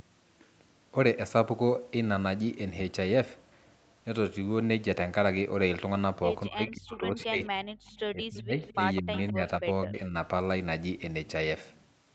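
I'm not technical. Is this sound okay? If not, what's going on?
No. From 6.48 to 7.68 s, 8.13 to 8.55 s and 9.01 to 10.14 s the voice sinks sharply or drops out in pieces. This is speech suppressed in double talk, likely because both sides spoke at once and the call's echo control turned the real talker down along with the echo.

There is also an echo leak: a delayed copy of the voice, arriving about a fifth of a second late, is heard faintly at 7.86 to 8.0 s and more clearly from 8.39 to 9.3 s. Unlike the dropouts, this adds an extra sound instead of removing one, likely from a loudspeaker's output getting back into the microphone.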